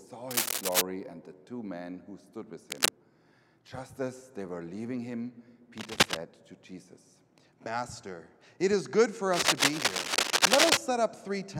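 Cable scratch noise at 0.31 to 0.81 s, 2.70 to 2.88 s, 5.77 to 6.17 s and 9.33 to 10.77 s: dense, uneven scratching bursts sit a little above the sound, likely from a worn connector whose contact resistance fluctuates as it moves.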